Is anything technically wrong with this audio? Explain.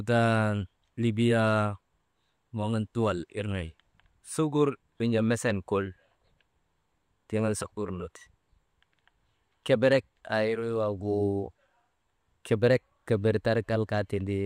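No, nothing is technically wrong with this speech recording. There is no fault to point to anywhere in it.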